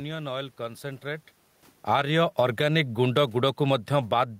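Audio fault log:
1.75–4.39 s, automatic gain falling: the gain control judged the input too loud and began easing its gain down, so the level sinks gradually to the end. The steady room noise sinks with it, which a talker moving, as happens near 1.0 s, would not cause.
2.00–3.54 s, automatic gain rising: within that fall the gain control also pushed its gain up by about 4 dB over roughly one and a half seconds. Sound and background swell together, unlike a talker moving closer, where only the voice would grow and the room noise would stay put.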